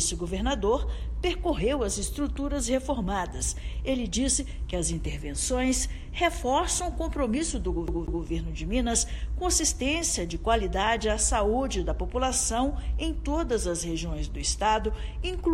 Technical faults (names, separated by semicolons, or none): CD stuck on one turn